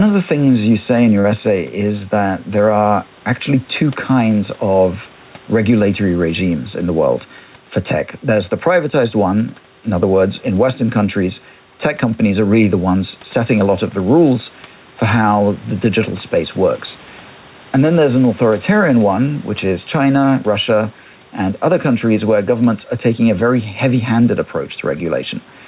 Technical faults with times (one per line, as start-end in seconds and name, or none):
0.00-25.67 gain pumping
1.20-1.27 short concealed packet loss